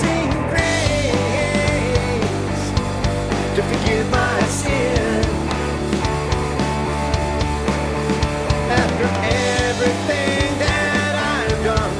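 Nothing in this audio stands out as a technical fault, as the signal holds steady throughout with no audible interruption or distortion.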